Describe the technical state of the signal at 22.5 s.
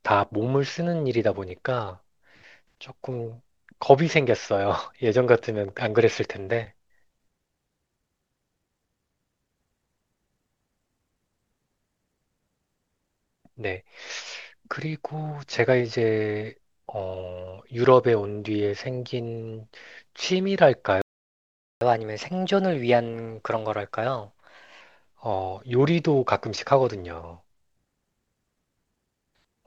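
At 22.5 s the speech is inside a catch-up at higher speed, running from 21.81 to 24.81 s. The player is working through a backlog left by a stall. It resamples the audio to play 1.1 times faster. Because resampling changes speed and pitch together, the voice is hurried and sits about a semitone and a half higher. After 24.81 s both drop back to normal.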